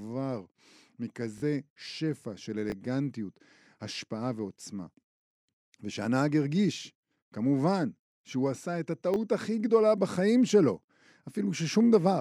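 At 1.38 s the speech catches on a repeated buffer. Fresh audio didn't reach the device in time, so it replayed the last block twice more, through 1.42 s. The hard joins give a quick buzzy stutter, which fits a 20 ms buffer, and roughly 40 ms of real audio goes missing. The same thing happens once each at 2.70–2.72 s and 9.14–9.16 s. Those are single repeats, so they're shorter clicks, each swallowing a sliver of speech.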